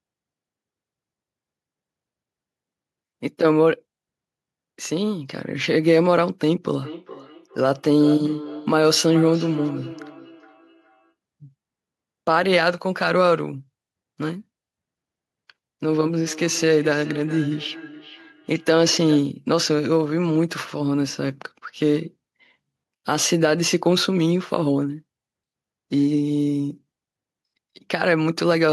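Feedback echo between two devices runs from 6.66 to 11.15 s and again from 16.23 to 19.33 s. Two devices in the same room are on one call, so one device's loudspeaker plays back what the other's microphone sent, and that microphone picks it up again. Each device's echo canceller removes only its own playback, so the sound comes back roughly every 400 ms. The repeats peak at about 15 dB below the speech in the first stretch and about 17 dB below in the second.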